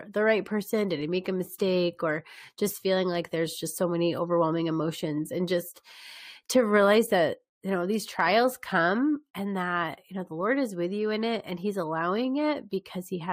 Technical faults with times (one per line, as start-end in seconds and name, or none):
none